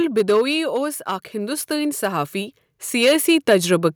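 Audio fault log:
throughout: hard clipping. Loud peaks of the speech carry a brittle crackle, a gritty edge that comes and goes with emphasis. The signal was driven about 5 dB past what the chain could pass, so a small share of peaks were sliced flat, spraying high harmonics.
0.05 to 1.11 s: automatic gain falling. The speech starts loud and then sinks, its background sinking with it, down by about 6 dB over roughly a second. The automatic gain control judged the input too hot and eased its gain back gradually.
1.05 to 3.95 s: automatic gain rising. Speech and background swell together over nearly three seconds, ending about 10 dB louder. The automatic gain control now found the input too quiet and raised its gain slowly, lifting everything evenly.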